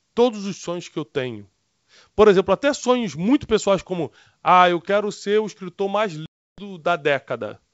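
A speech clip on a G.722 wideband call, with speech clear up to about 7 kHz. Just after "ser o escritor mais", packet loss on an ADPCM call opens a hard-edged silent hole from 6.26 to 6.69 s. About 320 ms of audio is gone, which fits a burst of roughly fifteen lost packets. When speech returns, the decoder's predictor and step size no longer match the sender's. There is brief, slight distortion until it resettles.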